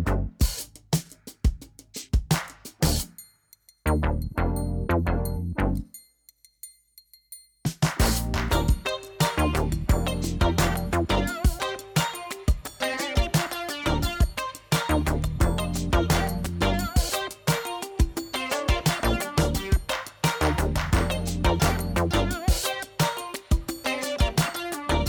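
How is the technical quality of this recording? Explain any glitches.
No technical glitches can be heard in this recording, so there is nothing to explain.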